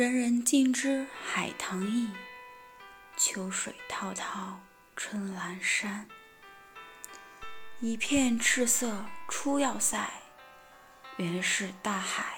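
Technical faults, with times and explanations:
7.43 to 9.93 s, DC step: the waveform's zero line suddenly shifts by a constant offset of about -39 dBFS, as happens when an input carrying an offset is switched in or a converter recalibrates, and at 9.93 s it drops back. Each abrupt shift is a near-instant jump in level that the speaker turns into a brief low thump or click, one at the start and one at the end, while the sound itself carries on unaffected.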